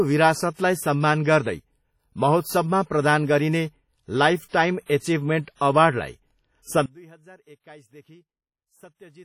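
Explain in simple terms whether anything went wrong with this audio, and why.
Yes, two things went wrong. Throughout the speech there is heavy ringing and a washy, hissy texture that swells and fades with the speaking. That is WMA compression damage, likely from saving the audio at too low a quality setting, which smears noise around each sound.

From 6.86 s to the end, the speech suddenly drops to a much quieter copy of itself. This is most likely one channel inverted: the two stereo sides were mirror images, so combining them into one channel made them cancel each other out.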